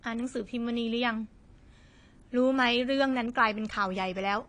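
Dull, smeared speech runs through the whole recording, with nothing above about 10.2 kHz and a plainly audible watery, fizzy texture on sibilants. The likely cause is AAC compression (AAC-LC) at a low bitrate, which fits roughly 32 kbps and strips and coarsely quantises the upper spectrum.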